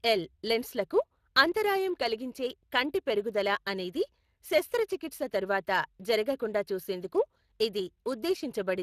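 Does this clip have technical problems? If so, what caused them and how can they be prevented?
Yes. Throughout the speech, Speex codec damage is plainly audible as a rough, grainy coarseness, with nothing above 15.2 kHz. This fits a Speex stream near 22 kbps, where the CELP model has too few bits to reproduce the excitation accurately. Unlike the swirly, watery artefacts of transform codecs such as MP3, the damage sits in the buzz of the speech itself. To prevent it, record or send at a higher Speex quality setting, or use a modern codec such as Opus.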